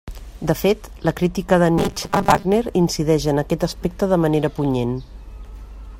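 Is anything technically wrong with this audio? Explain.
Yes. From 1.78 to 2.45 s, between "fet la crítica de" and "incideix en aquest aspecte", the speech becomes a rigid, metallic 200 Hz buzz: robotic sound from repeated short buffers, likely from about half the audio being replaced by repeats of a 5 ms block.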